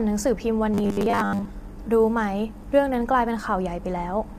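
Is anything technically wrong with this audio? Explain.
Yes, two faults. Throughout, the speech sounds rough and grainy, with noise between harmonics and a dull top band. This is likely low-delay AAC compression at a low bitrate. Its short frames resolve pitch poorly.

From 0.74 to 1.45 s, there is robotic sound from repeated short buffers. The voice becomes a rigid, metallic buzz at 100 Hz, which fits 10 ms chunks being replayed while most of the real audio is skipped.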